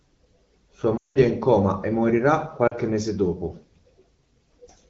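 Lost AMR speech frames at 0.97 to 1.18 s and 2.68 to 2.74 s: failed frames were concealed by repeating the last good settings with falling gain. The first drops to near silence within two frames, while the 40 ms one is a brief dip toward silence over the light AMR-WB wideband coding.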